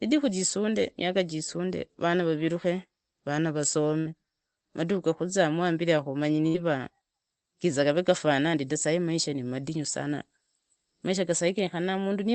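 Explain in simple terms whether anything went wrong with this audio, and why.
Twice the speech briefly turns into a stretched, fading sound and then jumps ahead: at 3.99 to 4.14 s, just after "jisunde rana raviruke vana", and at 6.47 to 6.57 s, after "gakuzizamu hambiri ya kamanyi". This is a burst of packet loss. A run of audio data never arrived in time, so the player stretched out the last sound to cover the gap. When playback resumed, the piece in between was gone.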